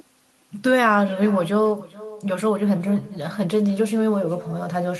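Echo with no canceller runs through the whole speech clip, from start to finish. The far end is playing the call through a loudspeaker, and its microphone captures that playback and sends it straight back with nothing to cancel it. Each phrase returns after a network round trip of roughly 0.4 s, sitting about 19 dB below the direct speech, so every syllable trails a faint, thin copy.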